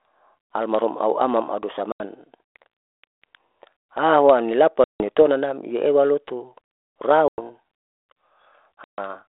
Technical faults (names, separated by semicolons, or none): packet loss on an ADPCM call